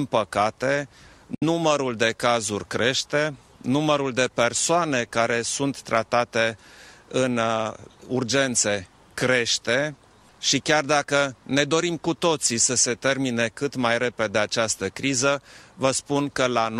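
A Bluetooth dropout cuts out the audio from 1.35 to 1.43 s, leaving a silence of roughly 70 to 80 ms with abrupt or briefly faded edges. The sound then resumes further along, as if it had kept playing through the hole. This is likely a wireless link failing to deliver audio packets to the headphones in time. Late packets are discarded rather than played, and a gap of this length fits about three lost frames.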